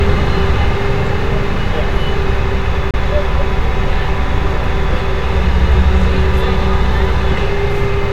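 From 2.91 to 2.94 s the sound cuts out for about 30 ms. The edges of the gap are abrupt or fade over a few milliseconds. When it returns, it has moved on, as if it kept playing. This is likely a Bluetooth dropout, with about two packets arriving too late and being discarded.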